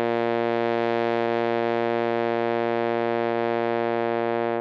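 A noisy ground shared between the computer and the audio circuit lets changes in processor, graphics or mouse load leak into the signal, and this computer activity noise runs throughout the music. It comes through as a faint buzzing, chirping texture pulsing at around 300 Hz, sitting roughly 45 dB below the music. Its rises and falls follow what the machine is doing rather than anything in the music itself.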